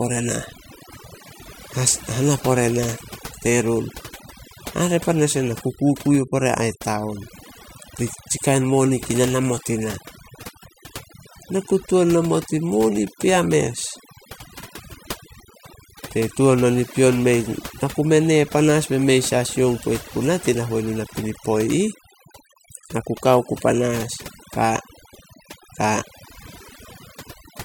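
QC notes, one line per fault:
Throughout, mains hum: a steady low tone sits under the speech from start to finish, pitched at 60 Hz with a few low harmonics above it, and roughly 25 dB below the level of the voice. It comes from the power line leaking into the signal path, most plausibly through a ground loop or a transformer close to the cabling, which feeds the supply frequency straight into the recording.
Throughout, overdone noise removal: the gaps between phrases drop to an unnatural near silence scattered with small twinkling, chirping specks. A noise reduction stage was pushed too hard, so it cuts individual frequency bands deeply whenever they resemble its noise estimate. The leftover noise survives only as isolated flickering bands, and the quieter parts of the voice are removed along with the noise.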